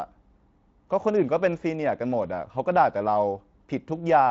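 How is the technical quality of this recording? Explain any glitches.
No glitches to report: the speech runs without dropouts, clicks or level jumps, and the Speex coding leaves only light colouring, consistent with a fairly high setting around 28 kbps.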